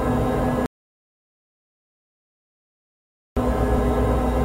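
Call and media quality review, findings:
Audio dropout to silence, 0.66 s to 3.37 s. Sound cuts to silence for about 2.7 s, no room tone. Likely input loss upstream while the encoder kept writing silence. Content lost.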